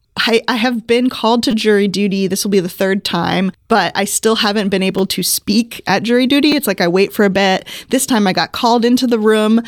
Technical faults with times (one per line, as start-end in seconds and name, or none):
1.51-1.53 repeated buffer
4.99 repeated buffer
6.52 repeated buffer